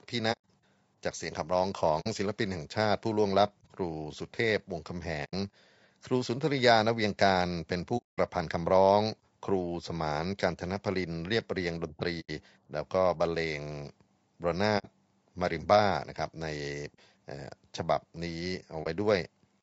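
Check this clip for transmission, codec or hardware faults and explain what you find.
Two faults are present. Compression damage runs throughout, and there are seven dropouts.

Low-delay AAC compression affects the whole speech clip. The voices sound rough and grainy, with noise between the harmonics and a dulled top band. This is likely AAC-ELD. Its short frames resolve pitch poorly, and the grain fits a low bitrate of around 32 kbps.

AAC frame loss with muting occurs at 0.32–0.40 s, 2.00–2.07 s, 5.24–5.34 s, 7.97–8.19 s, 12.20–12.30 s, 14.78–14.87 s and 18.83 s. Lost frames were decoded as silence. The overlapping windows fade the sound out and back in, so each run of lost frames is a soft-edged hole and the single lost frame at 18.83 s is a brief dip.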